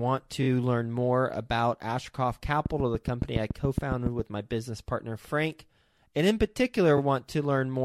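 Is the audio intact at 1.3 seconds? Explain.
Yes, the audio is intact at 1.3 seconds, with no fault audible at that moment.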